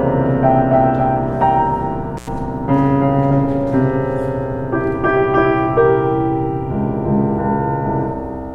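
At 2.17 s the music drops out briefly in an intermittent contact fault, with the signal path open for about 89 ms before returning at 2.28 s. A loose plug or cable conductor momentarily lost contact, so the program vanishes and only faint hiss remains, bracketed by crackle as the contact breaks and remakes. On a waveform this appears as a short flat gap with spiky edges; a spectrogram shows broadband vertical streaks at both ends around a near-empty stretch.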